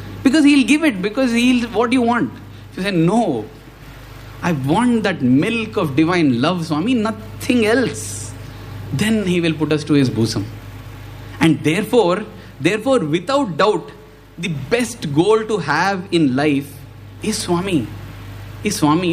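No technical faults can be heard anywhere in this audio.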